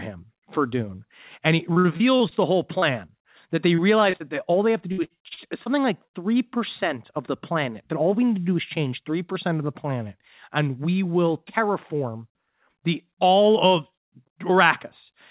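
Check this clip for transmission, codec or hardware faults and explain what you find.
Two kinds of network damage show up in this speech, both in the first six seconds, riding on a narrowband call path that cuts off everything above 4 kHz, which fits a G.711 mu-law telephone codec.

Repeated packet loss (robotic sound) hits three stretches: 1.73 to 2.34 s, 3.68 to 4.23 s and 4.92 to 5.69 s. Audio keeps going missing in holes up to about 51, 38 and 61 ms long. The receiver patches each hole by extending the last sound, so roughly a fifth to a quarter of each stretch is synthetic, and the speech turns choppy.

Short concealed packet loss happens twice, at 2.79 to 2.85 s and 3.06 to 3.11 s. Each time about 30 ms never arrived and was papered over by continuing the preceding sound, then blended back. You hear a brief smear or wobble.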